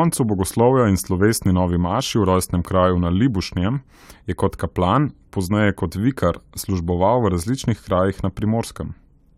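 Nothing goes wrong anywhere in this recording of speech, so there are no technical faults to point to.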